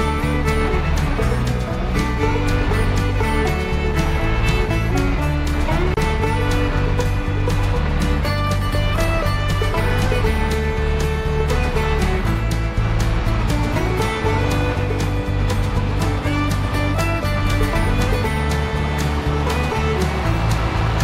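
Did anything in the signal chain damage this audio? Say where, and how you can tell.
Yes: a gap at a join of encoded pieces at 5.94 s, where separately encoded sections were spliced untrimmed, leaving encoder delay and end padding as a 29 ms gap.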